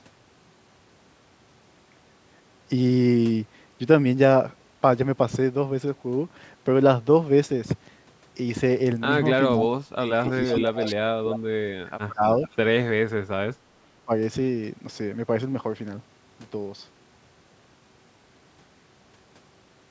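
From 9.53 to 12.24 s the speech keeps sinking and breaking up, falling by as much as about 30 dB and losing its brightness, for roughly two seconds in total across the span. This is speech suppressed in double talk, likely caused by both ends speaking at once while the echo canceller, unable to separate this talker from loudspeaker echo, turned everything down.

Inside that span, from 10.26 to 10.92 s, a faint delayed copy of the speech trails half a second behind, about 15 dB below the direct sound. A shorter scrap returns at 12.43 to 12.56 s, at the same 501 ms delay and about 20 dB down. Both are echo leak, likely from a loudspeaker end whose canceller let part of its microphone pickup back into the call.

From 13.1 to 14.12 s the speech is suppressed in double talk again, dropping by up to about 35 dB and cutting out in pieces for around a second.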